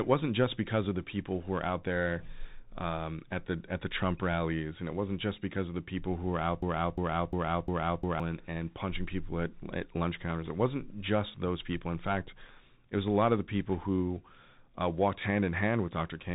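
All the way through, the speech carries Bluetooth CVSD headset codec damage. Nothing gets past about 3.8 kHz, s sounds come out scratchy, and a grainy hiss sits underneath. That's the one-bit up-or-down coder with its adapting step, which fits a 64 kbps headset link.

Right after "people who were out", from 6.62 to 8.20 s, there's a broken-record loop. A 0.35 s fragment plays four times back to back before "and and punching people" picks up. The likely cause is a stalled player or stream resending its last buffer, so whatever belonged in that gap is gone.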